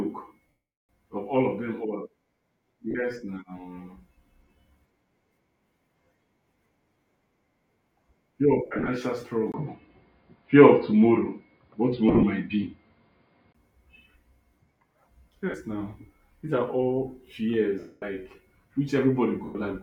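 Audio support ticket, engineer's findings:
Lost LE Audio frames at 0.48–0.89 s (410 ms), 2.91–2.95 s, 8.66–8.88 s (scattered, runs up to about 50 ms), 12.09–12.24 s (scattered), 15.50–15.54 s, 17.79–18.02 s and 19.45–19.55 s. The LC3 decoder conceals the gaps with a noisy smear that fades toward silence on the longer losses. On a spectrogram the harmonics blur into flat noise.

Dull, boxy band from 9.52 to 13.55 s, with a 20 ms silent gap at the switch. The likely cause is the input switched to a poorer device. The spectrogram shows nothing above 4.9 kHz, a level shift of about 5 dB, and a new noise floor about 50 dB down.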